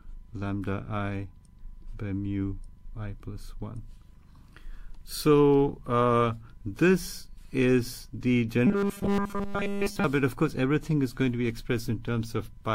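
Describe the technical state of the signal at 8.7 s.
At 8.7 s the sound has turned into a rigid, metallic buzz pitched at 200 Hz, lasting from 8.67 to 10.04 s. This is robotic sound from repeated short buffers, likely caused by audio arriving too seldom, so a 5 ms fragment is looped in place of all the real signal.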